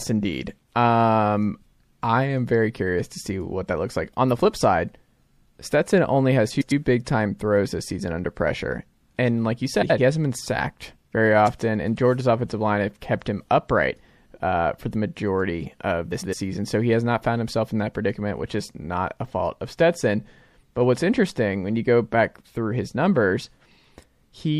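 Across the whole recording the speech has a watery, swirly texture, with s sounds turning metallic and chirpy and consonant attacks smeared. The likely cause is MP3 compression at a low bitrate, around 64 kbps. On a spectrogram the treble stops at a flat ceiling, and below it small tiles of energy blink on and off from frame to frame. The waveform looks blurred at onsets rather than sharp.

Frames out of order appear three times, at 6.50–6.72 s (after "only has", before "big time throws this"), 9.82–9.99 s (after "pressure and like you", before "hasn't been sacked very") and 16.11–16.33 s (after "for the majority of"). Two adjacent runs of frames were decoded in swapped order, so each stretch plays its halves exchanged. The halves are about 104.5 ms at 6.50 and 16.11 s, which fits blocks of four MP3 frames, and about 78.4 ms at 9.82 s, which fits three. Each sounds like a brief garbled flutter. 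On a spectrogram, formant tracks jump at three joins. The waveform shows abrupt envelope breaks there, and no time is lost.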